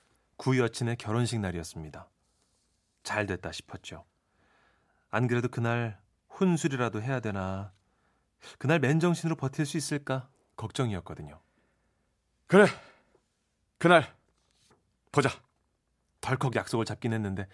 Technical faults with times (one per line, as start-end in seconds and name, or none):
none